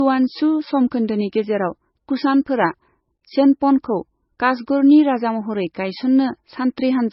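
It's a speech recording, and the whole clip has a hard ceiling, with nothing above 5.6 kHz and that swirly, smeared low-bitrate MP3 character throughout. It's likely low-bitrate audio saved at a high bitrate, so the generous second encode can't restore what the first one threw away.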